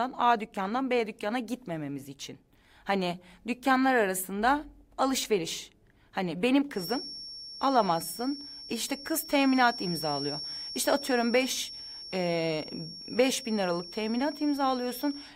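A feedback whistle runs from 6.71 s to the end of the clip: a thin, steady 5.5 kHz tone sitting around 15 dB below the speech. It is likely a loudspeaker-to-microphone loop held just at the edge of feedback.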